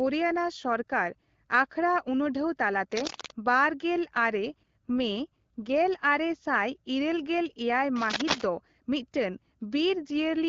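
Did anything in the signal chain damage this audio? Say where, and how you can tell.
Yes. A worn cable or connector in the analogue wiring, likely moved, adds dense, uneven scratching as loud as the speech from 2.92 to 3.32 s and 7.96 to 8.44 s.

An AMR rate drop on the network link pushes the AMR-WB codec from 12.65 to 8.85 kbit/s at 4.38 to 5.88 s and 9.94 to 10.45 s, making speech rougher with no gap or band change.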